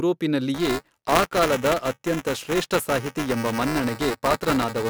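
Buffer tearing affects this speech from 0.54 s to the end: a 345 Hz robotic rattle, fitting a 128-sample buffer, as each period splices in a short sliver of audio from roughly 10 ms earlier.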